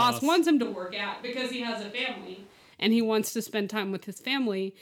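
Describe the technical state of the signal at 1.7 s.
At 1.7 s the speech is inside a switch to a distant microphone, running from 0.64 to 2.72 s. The close pickup has likely dropped out, leaving a roomy, hollow, thinner sound about 5 dB quieter. The spectrogram shows weakened lows and a raised noise floor, about 25 dB below the speech, and the waveform steps down abruptly at the start and back up abruptly at the end.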